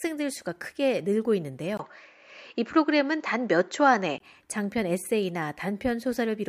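At 1.77 s there's a 20 ms gap, then the speech goes dull and boxy, with nothing above 7.6 kHz, a level shift of a few dB and faint new background noise, until 4.20 s. That's likely an input switched to a poorer device and back.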